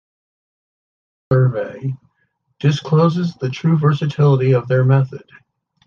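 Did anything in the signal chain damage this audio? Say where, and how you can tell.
Yes, a cut-off start: digital silence until 1.31 s, then speech lands mid-sound with no natural attack. The recording or stream simply began late.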